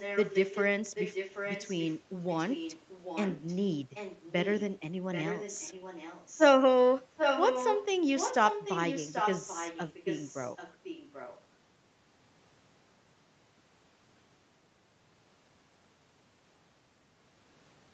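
From 0 to 0.64 s, then 0.94–1.98, 2.28–3.58, 3.94–4.64, 5.12–6.41, 7.17–7.85, 8.16–10.31 and 10.56–11.43 s, an echo leak repeats the speech about 0.79 s late, likely from a loudspeaker on the far end whose echo canceller let residue through. The copy sits roughly 10 to 20 dB down, but near 7.2 s it matches the speech in level. On a spectrogram, duplicated harmonic patterns trail the phrases in these spans by that fixed offset.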